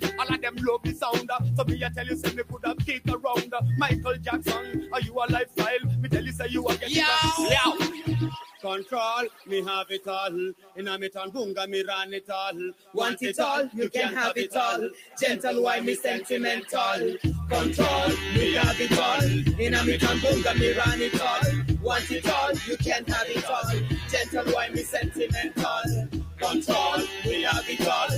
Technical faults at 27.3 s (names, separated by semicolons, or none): stuck bit; noise suppressor applied to music or sounds; sound cut by the noise suppressor